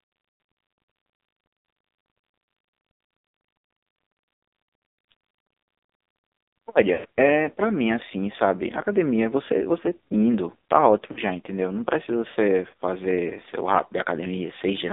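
Speech passed through the AMR narrowband mobile codec. Only 250 Hz to 3.7 kHz survives. Heavy coding damage makes it buzzy and synthetic, which fits a low AMR mode near 5.9 kbps. Lost AMR speech frames cause two dropouts. From 6.94 to 7.05 s, about 100 ms of sound smears and fades. From 11.12 to 11.20 s, a 40 ms loss gives a brief dip. Each time, the decoder reuses the last good settings at falling gain.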